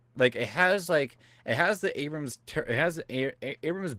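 Across the whole speech clip the sound is hoarse and faintly robotic, with plainly audible Opus voice compression damage. The coarse excitation coding in its hybrid voice mode suggests a low bitrate of around 16 kbps, with the upper band thinly coded.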